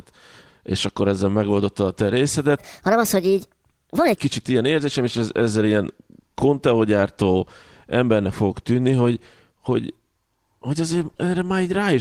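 Right after "ezzel megoldotta a te", at 2.07 s, there's a lost packet rebuilt from error correction. One 20 ms packet went missing, and the decoder filled the hole with the low-bitrate backup copy from the next packet, so nothing drops out, but that instant comes through rougher and grainier.

Then from 2.58 to 4.16 s, still after "ezzel megoldotta a te" and running up to "kicsit ilyen érzésem és", you get a section at the wrong speed. It plays about 1.39 times too fast, pushing the pitch up roughly five semitones, so the speech turns high and rushed. Likely it was fitted to the wrong clock somewhere along the way.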